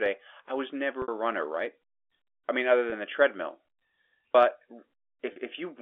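A brief, slightly buzzy held tone at 1.02–1.08 s (between "I was" and "a runner right"), 2.90–2.92 s (after "I mean other") and 5.32–5.36 s. This is packet loss with pitch repetition: the last pitch period was repeated to fill gaps of 60, 20 and 40 ms.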